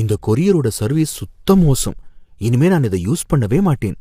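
Speech throughout, with rough, grainy voicing from what is likely low-delay AAC compression (AAC-ELD), fitting roughly 32 kbps; a spectrogram shows smeared harmonics, noise filling between them, and a thin, patchy top band.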